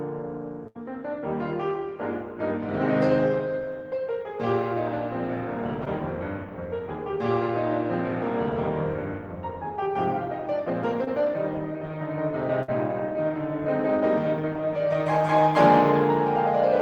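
At 0.67 to 0.85 s, a burst of packet loss: about 80 ms of music is missing, bridged by a fading continuation of the last sound before playback resumes further on. Short concealed packet loss at 5.85 s and 11.04 s leaves brief smears where roughly 20 ms gaps were filled. A second burst at 12.62 to 12.70 s drops about 60 ms the same way.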